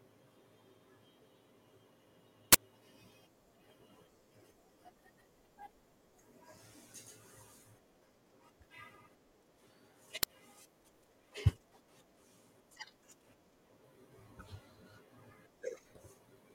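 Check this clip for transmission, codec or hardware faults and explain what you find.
Two uninitialised buffer faults occur, at 2.53 to 2.55 s and at 10.23 s. In each, a buffer (20 ms the first time, 5 ms the second) went to playback before any audio reached it, so stale memory was played as samples, producing an abrupt, loud crack.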